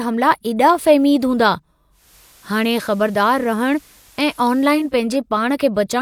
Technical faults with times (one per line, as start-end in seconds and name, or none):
1.90-4.96 digital radio blending to analogue